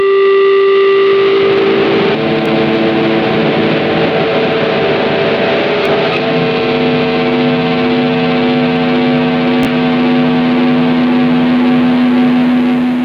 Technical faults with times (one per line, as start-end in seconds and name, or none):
0.00-13.05 gain pumping
2.46-2.48 Bluetooth stutter
5.85-5.88 Bluetooth stutter
9.63-9.70 Bluetooth stutter